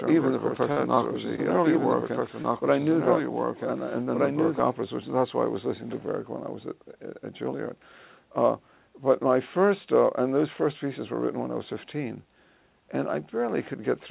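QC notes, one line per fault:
0.00–4.60 s, doubled audio track: a second full-band copy, about 5 dB quieter, trails the sound by roughly a second and a half. It is already under way when the clip begins and ends abruptly, with no decay or room colour. The likely cause is a second, slower capture path or an edit holding two copies out of step.
0.72–0.78 s and 2.42–2.46 s, short concealed packet loss: each time about 20 ms of audio never reached the decoder. The receiver bridged the gap by extending the preceding sound, 40 ms of fill at 0.72 s and 20 ms at 2.42 s, then blended back, leaving a brief smear or wobble.
0.95–1.12 s, short stall from a late packet: a packet arrived after its due time, and the jitter buffer ran dry. The last sound was stretched by about 23 ms, then playback resumed where it left off and trimmed roughly 7 ms to catch up. Nothing is lost, but one moment is held slightly too long. 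All of this sits within the telephone-band G.711 path, with nothing above 4 kHz.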